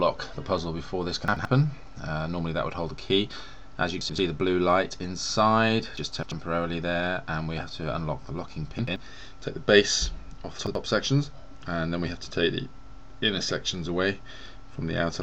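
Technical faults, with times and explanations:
1.28–1.45 s, 4.01–4.18 s, 8.79–8.96 s, 10.58–10.75 s: chunks out of order. Two adjacent 85 ms blocks swap places, so the sound briefly stutters backward-forward. The waveform and spectrogram show three abrupt vertical seams where content jumps discontinuously, with nothing missing.
5.97–6.32 s: chunks out of order. One 85 ms chunk arrives three chunks late and plays after the material that should follow it, giving a longer jumbled stretch of about a third of a second. Three hard joins appear as sharp vertical lines and sudden waveform steps.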